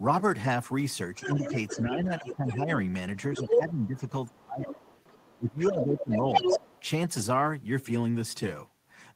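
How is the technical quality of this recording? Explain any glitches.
The recording has audible echo-canceller trouble from about 1.1 to 6.8 s, where a second voice leaks in and the main talker is pushed down.

Other side's voice leaking through appears at 1.15–1.82 s, 2.21–2.55 s, 3.35–3.86 s and 4.71–6.82 s. The far-end loudspeaker signal was likely not fully cancelled at the microphone, so a second voice sits about 10 dB under the talker early on, then rises to roughly equal or slightly louder.

Speech suppressed in double talk occurs at 1.22–2.72 s and 3.32–6.6 s, overlapping the leakage. With both sides active, the canceller likely could not separate near speech from echo and attenuated everything. The talker dips by about 10 dB first, then by about 20 dB in the longer stretch.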